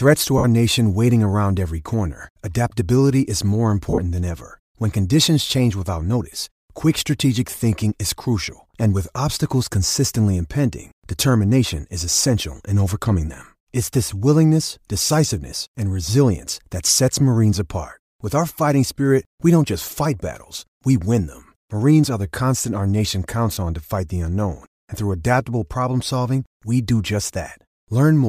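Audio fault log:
0.38–0.45 s, 3.90–3.98 s, 23.55–23.57 s: lost LE Audio frames. About 60 ms of audio drops out before "nation waiting around every", 70 ms in short bursts between "corner adaptability is more" and "than ever", and 20 ms between "constant our nation" and "on to fight the". The second gap is broken up, with the longest continuous stretch around 40 ms. Each gap becomes a brief noisy smear rather than a clean cut. The decoder, likely LC3 on a Bluetooth link, fills the missing 10 ms frames by repeating the last spectrum with random signs.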